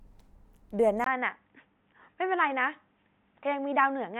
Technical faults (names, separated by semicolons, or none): input switched to a poorer device